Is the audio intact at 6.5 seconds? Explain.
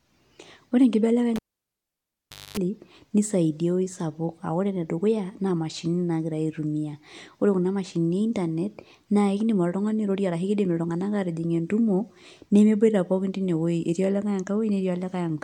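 Yes, the speech at 6.5 seconds is intact, with no dropout, click, distortion or other fault to be heard at that moment.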